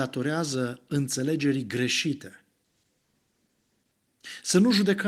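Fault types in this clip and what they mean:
call bitrate drop: from 2.66 to 4.01 s the speech turns rough and coarse, which fits the Opus encoder dropping from 32 to 13 kbps.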